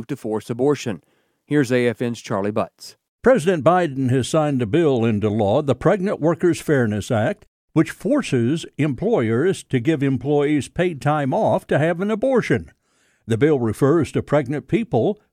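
Speech, with nothing technically wrong with it.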